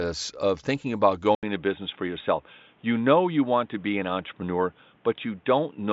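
Speech that, after "of thinking about" at 1.35 s, goes quiet for 80 ms and then turns boxy, with nothing above 3.8 kHz and a new hiss well below the speech, most likely an input switched to a poorer device. Loudness stays the same. A new noise floor and an abrupt gap, not a gradual dulling, set it apart from a filter or codec change. Before the switch, the mSBC headset path reaches about 7.7 kHz.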